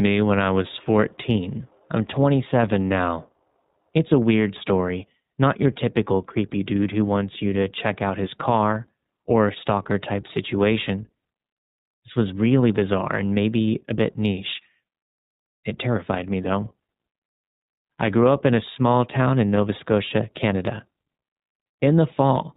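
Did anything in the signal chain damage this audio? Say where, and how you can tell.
Yes. Throughout the speech the sound is band-limited, with nothing above 4 kHz, and has a clearly rough, slightly synthetic grain. That points to the codec stage: iLBC, coding each short frame independently, consistent with its 20 ms, 15.2 kbps narrowband mode.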